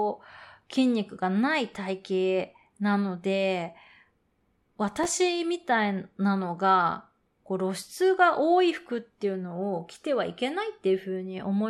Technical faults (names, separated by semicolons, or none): processor overload crackle